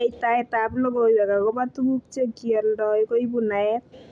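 No technical faults are audible anywhere in the speech.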